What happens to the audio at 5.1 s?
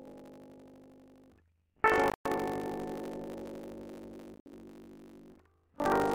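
At 5.1 s the music carries buffer tearing, as it does throughout. Writer and reader cross within each 20 ms period, so about a third of each buffer replays audio from roughly 70 ms earlier. The result is a 50 Hz rattle that, unlike dropouts, contains no silent gaps and is present only while music plays.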